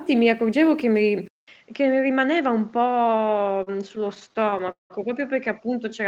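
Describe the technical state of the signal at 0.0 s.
The signal at 0.0 s is intact, with no audible technical fault at that moment.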